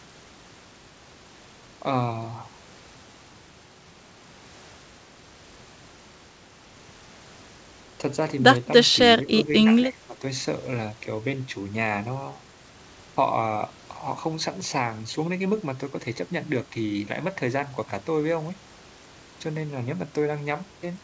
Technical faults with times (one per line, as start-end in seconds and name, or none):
9.23-10.23 speech suppressed in double talk